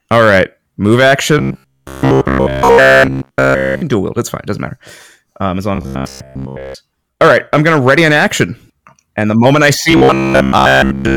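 Hard clipping runs through the whole speech clip. The signal is driven about 6 dB past what the chain can pass, so a small share of peaks are cut flat. Louder syllables carry a crackly, harsh edge.

Robotic sound from repeated short buffers appears three times as a rigid, metallic 66.7 Hz buzz. It fully replaces the speech from 1.39 to 3.82 s, ending before "dual wield". It covers most of 5.76 to 6.75 s after "as long", and 9.91 to 11.17 s after "the moment I". The likely cause is a 15 ms chunk replayed repeatedly.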